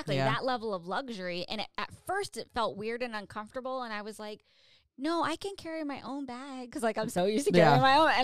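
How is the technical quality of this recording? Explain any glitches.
The recording has one glitch, a sudden gain jump. At 7.18 s the speech and the background noise both become abruptly louder by about 6 dB and stay there to the end. This is likely a digital gain change applied instantly, with no ramp, between two samples.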